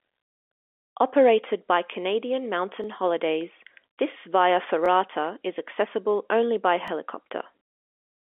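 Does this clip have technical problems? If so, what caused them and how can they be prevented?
Yes. Overlapping chunks cause a brief stutter at 2.84, 4.86 and 6.88 s. The second comes right after "this via", and the third right after "is accessible only by". The audio was handled in 2-second chunks. Each new chunk began about 20 ms before the previous one ended. So that 20 ms slice plays twice at every join, giving a regular hiccup. To prevent it, align chunk boundaries exactly, or crossfade and trim any overlap before joining.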